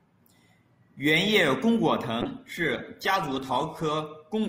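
Speech, with a call bitrate drop from 2.23 to 4.01 s. The sound turns coarse, watery and muffled as the highs are cut. It stays degraded for about 1.72 s, then recovers. This fits the encoder being forced from roughly 48 kbps down to 15 kbps.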